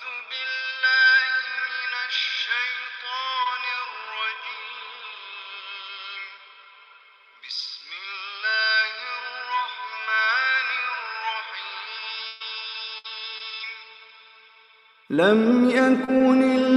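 At 3.43 to 3.47 s the audio has a short concealed packet loss. About 20 ms went missing, and the receiver extended the preceding sound, leaving a brief smear. A lost packet rebuilt from error correction follows at 3.45 to 3.47 s and again at 3.76 to 3.78 s. Each 20 ms stretch was played from a low-bitrate backup copy, so it sounds rougher and noisier instead of dropping out. From 11.93 to 13.61 s there is repeated packet loss with a robotic sound. Three gaps, the longest 131 ms, were patched by continuing the last sound, and they take up about 12 percent of the span, so that stretch turns choppy. From 15.15 to 16.60 s come scattered short gaps. There are roughly three small holes, the longest about 20 ms, covering around 4 percent of the span, and they leave brief ticks in clear sound.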